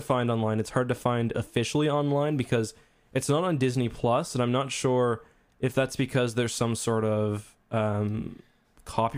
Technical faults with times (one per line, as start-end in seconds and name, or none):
none